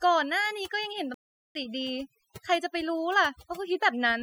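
Overdone noise removal runs the whole way through: the suppressor clamps bands near its noise estimate too hard, leaving a near-silent background with twinkly specks. Then from 1.14 to 1.55 s the sound cuts out for about 0.41 s and picks up again, a playback stall, likely the player running short of data.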